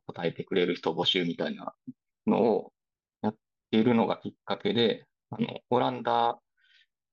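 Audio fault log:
No faults are audible anywhere in this speech recording.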